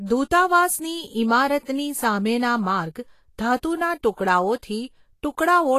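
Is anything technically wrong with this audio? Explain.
Yes. Throughout the speech there's plainly audible Vorbis compression damage, likely from a low bitrate, somewhere near 33 kbps. Nothing survives above 14.2 kHz, and the coarsely quantised treble has turned fine detail into grainy hiss, leaving consonant onsets blurred and the voice roughened.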